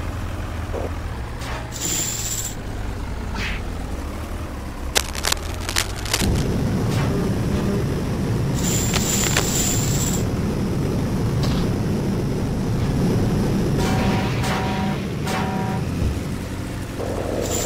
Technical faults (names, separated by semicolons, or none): cable scratch noise